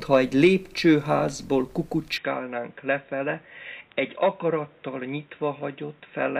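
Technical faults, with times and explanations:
2.18–6.40 s, input switched to a poorer device: likely a narrower-band microphone took over without a gap. The spectrogram cuts off at 3.8 kHz, and the waveform is about 5 dB smaller, with new noise roughly 35 dB below.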